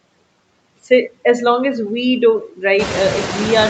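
Noise suppressor artifacts run through the whole speech clip. The suppressor treats the steady background as noise and cuts it by about 21 dB, frame by frame. Between phrases the background nearly vanishes. Under the voice it comes back. Near 3 s the room noise rises by about 16 dB, to only about 9 dB below the speech.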